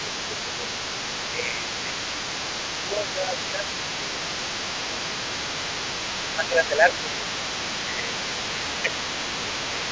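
From the very start to the end of the clip, a second, fainter voice runs underneath the main speech, sitting around 10 dB below it. It is most likely the other side's voice leaking through, played on the talker's loudspeaker and not fully removed by the echo canceller. On a spectrogram it shows as a separate set of weaker harmonic traces interleaved with the main talker's.

Over that leak, the main speech repeatedly sinks in level. This is likely speech suppressed in double talk: with both voices present, the echo canceller turned the talker down along with the echo. Deeper dips of roughly 10 dB come at 0.04 to 0.65 s, across a long stretch from 1.32 to 5.68 s, at 7.84 to 8.31 s and briefly at 8.82 to 8.95 s. Milder dips of about 5 dB fall at 6.25 to 7.39 s and 9.48 to 9.89 s. The waveform envelope shows notches at those times, and on a spectrogram the talker's traces weaken during those gaps, below the normal 8 kHz ceiling of the call processing.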